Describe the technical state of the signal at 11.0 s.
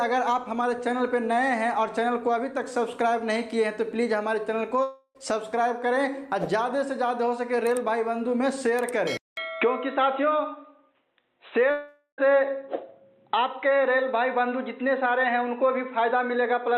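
At 11.0 s the recording has likely had its input switched to a poorer device. From 9.17 s to the end, after a 200 ms silence at the switch, nothing above 4 kHz gets through, so the sound turns dull and boxy at an unchanged level over a faint new noise floor.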